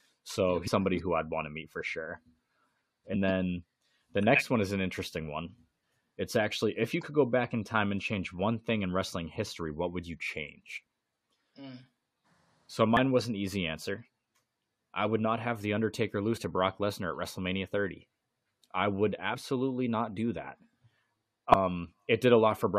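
Compressed frames were skipped at 0.66–0.68, 3.12–3.17, 10.76–10.78, 12.97, 16.34–16.38, 19.33 and 21.51–21.55 s. Each drops roughly 20 to 150 ms of speech, so the speech jumps ahead at the join. On a waveform or spectrogram, that join shows as an abrupt discontinuity.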